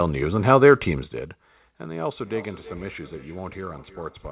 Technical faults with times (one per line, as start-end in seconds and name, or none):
2.25-4.32 feedback echo between two devices